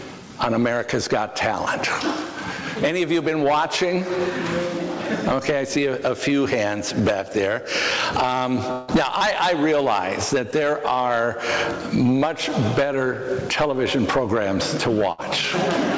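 A stretch of network interruption from 8.72 to 8.90 s is likely a long network dropout. About 160 ms of audio never arrived, and the receiver covered the whole gap by extending the last sound it had. The gap sounds like a held, fading buzz or hiss rather than silence. When the signal returns it has jumped ahead, skipping the lost portion. Near the end, from 15.12 to 15.20 s, a burst of packet loss removed about 60 ms in a row. The receiver again continued the preceding sound and let it fade, giving a brief smeared tail before the audio resumes slightly further on with that slice missing. Both gaps sit on audio carried over a call path using the G.722 codec, which is why nothing above 8 kHz is present.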